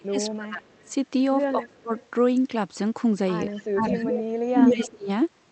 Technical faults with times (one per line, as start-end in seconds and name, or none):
0.00-0.64 speech suppressed in double talk
0.65-0.91 echo leak
1.53-1.93 speech suppressed in double talk
1.60-2.07 echo leak
3.51-4.33 echo leak
3.71-4.13 speech suppressed in double talk
4.48-5.09 speech suppressed in double talk
4.65-4.89 echo leak